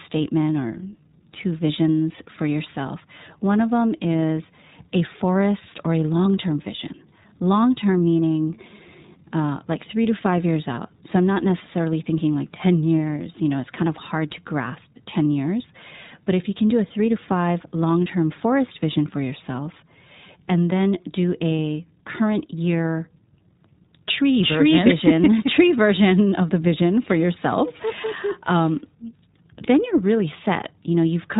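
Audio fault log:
throughout, iLBC codec: the speech is band-limited to narrowband, with nothing above 4 kHz, so sibilants and consonant edges lose their brightness. A plainly audible rough, slightly synthetic grain runs through the voice. The codec models each short frame's excitation on its own without drawing on the previous frame, so small discontinuities accumulate as texture. The character fits 20 ms iLBC frames at its 15.2 kbps mode.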